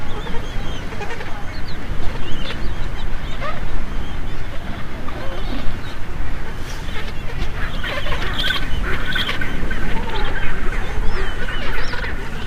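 Sample clock jitter runs from 5.17 to 9.70 s. The converter's timing wanders by a few microseconds, so each sample lands slightly off, leaving an error roughly 35 dB below the signal. It comes through as a faint hiss and roughness that thickens on loud, bright passages.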